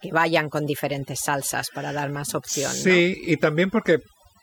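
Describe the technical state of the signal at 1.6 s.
At 1.6 s the speech carries overdone noise removal, present across the whole clip. Aggressive noise reduction cuts individual frequency bands near its noise estimate and drags quieter parts of the voice down with them. The background drops and breaks up into twinkling specks.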